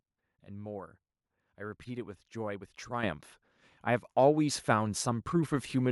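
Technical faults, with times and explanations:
3.03 s, microphone volume stepped up: the call software judged the microphone input too quiet and raised the device's input volume in a single jump of about 8 dB rather than ramping it gradually. Because the change happens at the capture stage, the speech and the background noise floor both become louder at the same instant, producing an abrupt step in overall level instead of a smooth adjustment.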